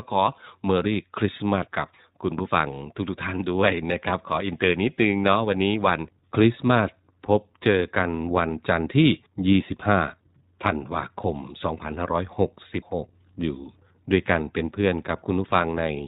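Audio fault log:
Throughout, iLBC codec: a hard spectrogram ceiling at 4 kHz; each 20 ms frame is coded independently, making the speech plainly rough and synthetic.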